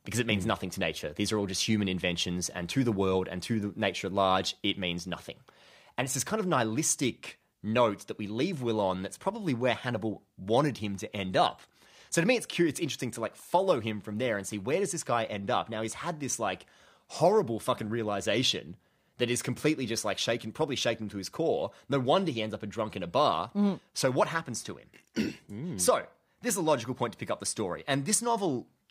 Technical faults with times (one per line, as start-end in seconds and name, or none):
none